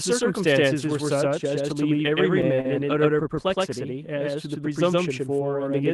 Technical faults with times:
0.00-5.93 doubled audio track
2.61-2.67 short stall from a late packet

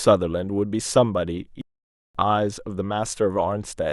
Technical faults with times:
1.61-2.15 playback stall

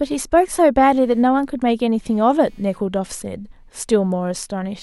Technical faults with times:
0.90-4.82 computer activity noise

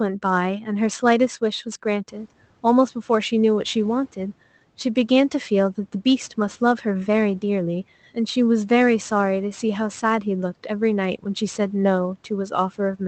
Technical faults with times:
0.00-13.07 sample clock jitter

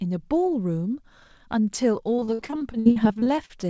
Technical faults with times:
2.16-3.64 repeated packet loss (robotic sound)

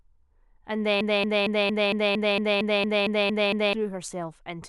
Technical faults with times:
1.01-3.73 broken-record loop

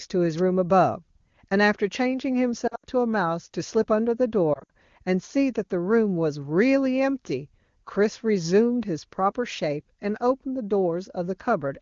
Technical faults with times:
0.37-0.40 wireless microphone noise hit
2.67-2.85 lost AMR speech frames
4.53-4.70 lost AMR speech frames

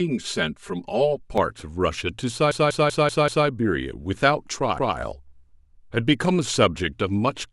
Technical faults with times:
0.00-1.38 channel delay (comb filtering)
2.51-3.47 repeated frames
4.78-4.97 repeated frames

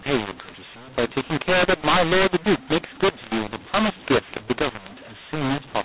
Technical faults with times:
0.00-5.85 mu-law and A-law mixed up

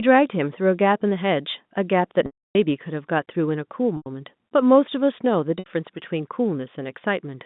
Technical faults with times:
2.26-2.55 packet loss with pitch repetition
3.97-4.06 packet loss with pitch repetition
5.59-5.66 packet loss with pitch repetition

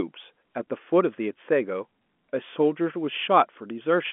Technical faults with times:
none

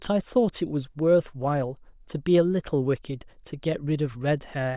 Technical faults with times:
none

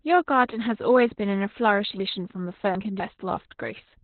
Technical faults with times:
0.00-4.03 Opus voice compression
2.00-3.00 chunks out of order

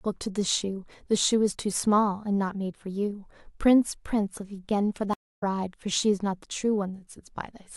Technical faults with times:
5.13-5.43 stream reconnect

